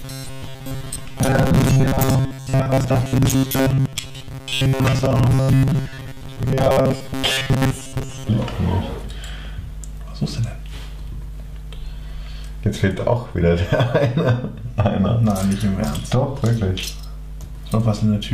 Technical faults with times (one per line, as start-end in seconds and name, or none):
0.01-8.29 robotic sound from repeated short buffers